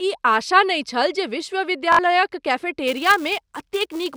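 At 1.93 to 1.99 s there's a Bluetooth stutter. The receiver ran dry for about 61 ms, which sounds like roughly three lost packets, and kept replaying its last short slice, giving a quick machine-gun rattle before the speech picks up further along.

From 2.87 s through to the end, the filter is restarted on every block. It drops its state each time and starts cold, so every block opens with a tiny tick. Those ticks merge into a 375 Hz buzz riding the speech level, which fits a 128-sample block.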